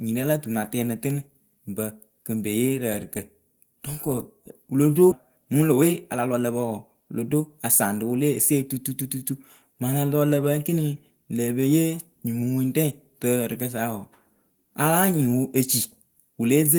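Speech that jumps abruptly forward at 5.11 s, right after "kɔ wɨ lo do": the two sides of the cut are joined with no gap, and roughly a second of audio is gone. This is a skip ahead, where a stretch of audio was discarded in transit or by an overflowing jitter buffer while later audio was already queued. From 5.24 to 7.48 s, ending just before "a saŋ rɨ wɨ", the talking sounds hurried, running at about 114% speed while the pitch stays the same. This is a jitter buffer speed-up: with too much audio held back, the receiver trimmed short pitch-period-sized pieces again and again, removing around a third of a second in total to cut the delay.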